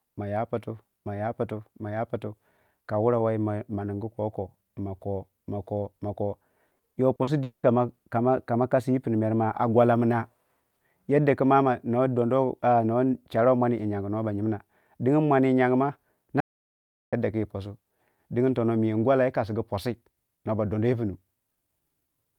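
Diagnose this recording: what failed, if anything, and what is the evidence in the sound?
Network stage: repeated packet loss from 6.67 to 7.66 s, five gaps up to 200 ms, each filled by extending earlier speech. It sounds choppy, not silent.

Audio dropout to silence from 16.40 to 17.13 s: 0.72 s of silence, with no room tone and no concealment. The likely cause is a lost input link.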